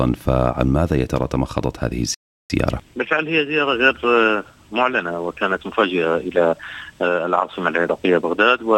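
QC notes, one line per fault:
2.14–2.50 s, playback stall: the sound cuts out abruptly in mid-flow and the output stays silent for about 0.36 s before the audio resumes. The break has no fade or tail, so it reads as a hard gap rather than a natural pause. The likely cause is the player running short of buffered data, or its playback thread being held up, so nothing reached the output until it caught up again.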